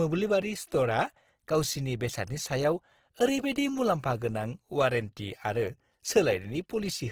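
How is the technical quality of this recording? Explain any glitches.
The recording carries plainly audible codec damage from start to finish. The likely cause is Opus compression in its CELT (music) mode, at a rate that fits something around 16 kbps. With so few bits, the encoder keeps the overall energy in each frequency band but cannot code the fine detail. It fills those bands by copying structure up from lower bands or by inserting noise. The speech therefore sounds rough and grainy throughout, with a noisy texture rather than the swirling of MP3. The bandwidth stays full, reaching about 20.5 kHz.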